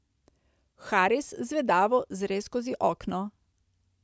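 Nothing goes wrong anywhere in this bit of speech, so there's no technical fault to point out.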